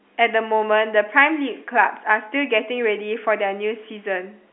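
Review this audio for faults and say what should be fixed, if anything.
Nothing here needs fixing: it's ordinary telephone-line speech, with the narrow band of a G.711 call running from about 250 Hz to 3.4 kHz and nothing audible above 3.8 kHz, just as that phone coding should sound.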